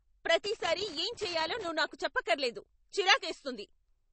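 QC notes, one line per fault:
throughout, MP3 compression: The sound was likely squeezed through an MP3 encoder at a low rate, the damage fitting something around 32 kbps. Short of bits, the encoder drops the treble entirely, leaving nothing above 8.3 kHz, and discards weaker frequency lines that then flicker in and out from frame to frame. The speech comes across dull and plainly watery, with a swirling, metallic edge on sibilants and softened consonant attacks.
0.44 to 1.69 s, loose connector crackle: A contact somewhere in the signal chain was making and breaking rapidly, as a worn or dirty connector does when it shifts. Each break chops the signal, and any DC on the line turns the reconnections into pops. For about 1.2 s the speech is overlaid with an irregular, scratchy burst of crackle, which clears just before "నాకు చెప్పక్కర్లేదు".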